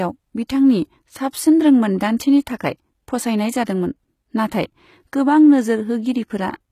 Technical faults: HE-AAC compression

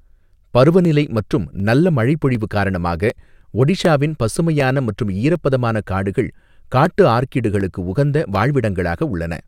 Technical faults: clock drift buffer slips

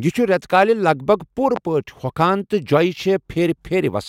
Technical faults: loud pop

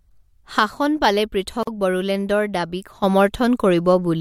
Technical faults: one channel drops out; gap at a join of encoded pieces

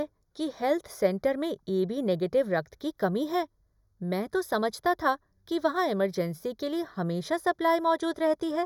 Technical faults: channel delay (comb filtering)

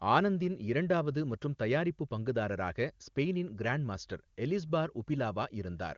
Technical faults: none

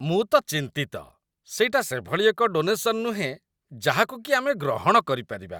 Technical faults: none

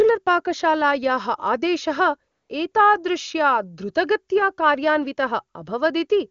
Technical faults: AMR comfort noise

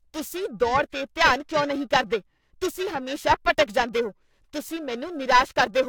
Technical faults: periodic clock jitter

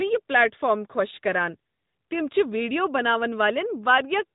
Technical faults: AMR narrowband mobile codec

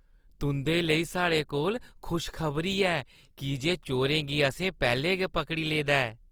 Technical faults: Opus compression

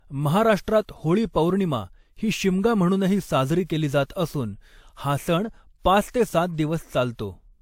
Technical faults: transcoding between lossy codecs

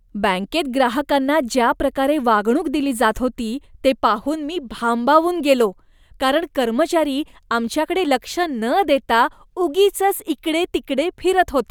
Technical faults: none

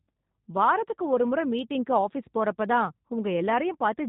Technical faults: G.729 codec

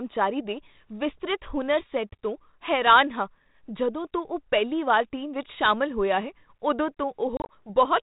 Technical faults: packet loss on an ADPCM call

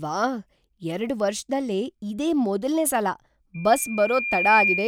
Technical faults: loudspeaker feedback squeal

